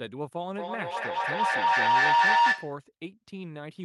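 From 0.54 to 2.87 s a feedback howl builds near 1 kHz, pulsing about every fifth of a second and peaking about 14 dB above the speech.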